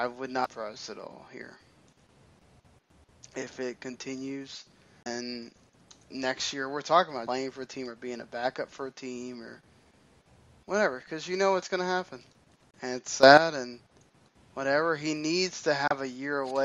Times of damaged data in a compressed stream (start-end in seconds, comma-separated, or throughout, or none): 0.45, 5.03-5.07, 7.26, 12.71-12.75, 15.88-15.91